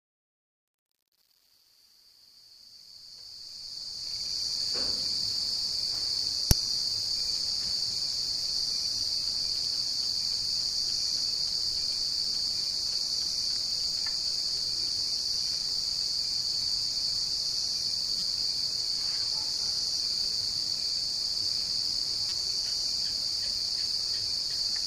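The fade-in stage keeps only about 8 bits and adds no dither, so truncation distortion runs from 0.0 to 4.59 s. Worst through 4.04 s, the quiet opening collapses into coarse square steps that sound gritty until the fade-in smooths out near 4.59 s.

Damaged data in a compressed stream then makes the decoder misread frames and lose sync while hunting for the next header. It causes short blips at 6.51, 9.65 and 13.84 s, and longer glitches from 18.19 to 18.23 s and from 22.29 to 22.32 s.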